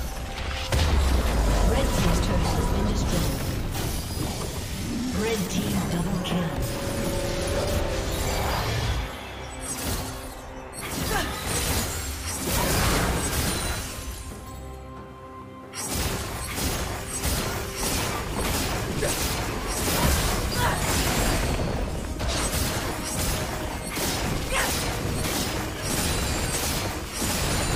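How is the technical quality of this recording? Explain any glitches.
The recording has one recurring glitch. Clock drift buffer slips run from 0.26 s to 27.75 s: a click repeats every 0.95 s, about thirty times. Two device clocks likely disagreed by roughly 700 ppm, so a buffer drifted until around 30 samples were dropped or repeated, clicking each time.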